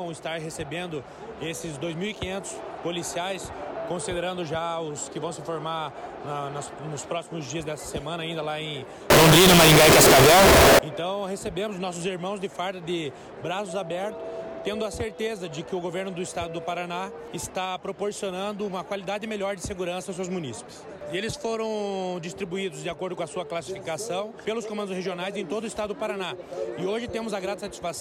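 From 9.10 to 10.79 s, the sound turns into a float read as integer fault. The likely cause is 32-bit float samples being read as 32-bit integers. The waveform flattens into near-square blocks at an almost fixed, high level. It sounds very loud and harsh, with background noise as loud as the main sound.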